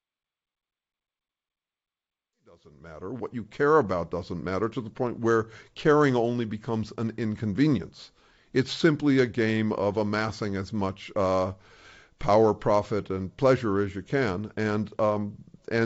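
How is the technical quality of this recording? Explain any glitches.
Nothing here counts as a glitch, since no dropouts, clicks or distortion turn up anywhere in the recording.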